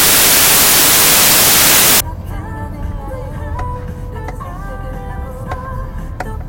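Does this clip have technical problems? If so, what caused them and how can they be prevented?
Yes. From 0.0 to 2.0 s the audio is loud, harsh broadband noise caused by samples built from the wrong bytes: the reader mis-assembled each sample, so the rapidly changing low bits became the dominant part of each value. On a spectrogram this looks like flat, full-band noise, and the waveform is a dense block. To prevent it, declare and check the byte order, sample width and alignment wherever raw audio is read.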